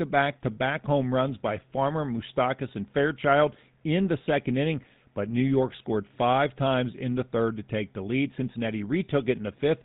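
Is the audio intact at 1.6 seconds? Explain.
No. At 1.6 s, as throughout this speech clip, the GSM full-rate codec is at work, with a buzzy, gravelly roughness consistent with a 13 kbit/s stream. It rebuilds the voice from a vocal-tract model and sparse, regularly spaced excitation pulses. That pulse-driven grit, not just lost treble above 4 kHz, separates it from simple band-limiting.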